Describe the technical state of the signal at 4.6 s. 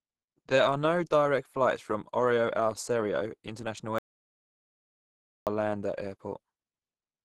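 At 4.6 s the signal is dead silent: no speech and no room tone. This audio dropout to silence runs from 3.99 s to 5.47 s, removing about 1.48 s of speech. The sound stops abruptly and resumes mid-flow, and whatever was said in between is gone. The likely cause is a lost input, such as a disconnected device, a failed link or an accidental mute, while the recorder kept writing empty samples.

The speech on either side of the gap, and the silence itself, sits inside Opus compression that is plainly audible throughout. The sound is muffled and somewhat hoarse, with a grainy, rough texture and nothing above 12.2 kHz. That narrowed bandwidth and hoarse character suggest a low rate, which fits roughly 16 kbps, where the encoder has likely moved from its music mode into its speech-oriented hybrid mode.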